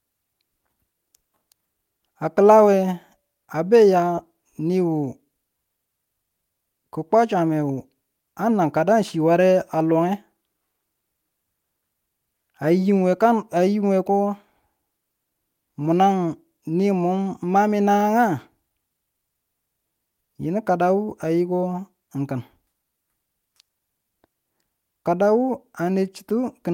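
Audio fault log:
4.15–4.19 s, short concealed packet loss: about 20 ms of speech arrived too late for the decoder, and the receiver bridged 17 ms of it by extending the preceding sound before crossfading back, leaving a brief smear.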